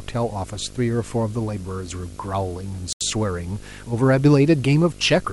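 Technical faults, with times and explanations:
Throughout, video or display buzz: a 50 Hz buzz with hash above it sits roughly 20 dB under the speech, from a screen or video cable coupling into the audio.
2.93 to 3.01 s, Bluetooth stall: the speech cuts to 80 ms of silence, then resumes, likely because delayed packets left the headphones' buffer empty.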